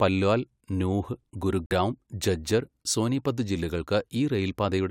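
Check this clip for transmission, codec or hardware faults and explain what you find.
One fault is present: a corrupt frame muted. From 1.66 to 1.72 s, right after "പല്വാൽ നൂഹ്", the speech drops to silence. It resumes at "ഝജ്ജർ സോനീപത്". Damaged compressed data was rejected by the decoder and replaced with silence. The gap starts abruptly, lasts about 60 ms, consistent with two lost frames, and timing stays intact.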